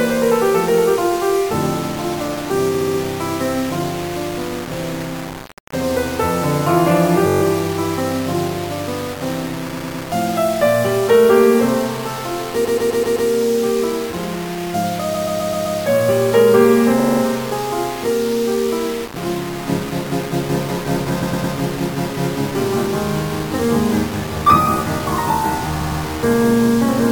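From the first second to the end, the music carries a coarse, grainy distortion that rises and falls with the playing, sitting only about 15 dB below the signal. Quiet passages turn gritty and the faintest tails sputter or vanish. This is low bit depth without dither, likely from rounding to something like 5-bit resolution. Hiss would stay steady, but this error follows the music because each sample snaps to a few coarse steps.

Repeated frames then break the flow eight times: at 2.74 s, 7.26 s, 9.72 s, 12.64 s, 15.13 s, 16.99 s, 21.21 s and 25.80 s. Each time, a short block of audio plays again and again, like a skipping record. The blocks are 64 ms, 21 ms, 107 ms, 128 ms, 128 ms, 43 ms, 107 ms and 107 ms long, and each stutter lasts between 0.15 s and 0.64 s. These block lengths fit whole compressed frames of about 21 ms being sent more than once. Unlike a dropout, nothing goes missing and no gap is filled with silence. 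Instead, identical material recurs and the music arrives later by the repeated time.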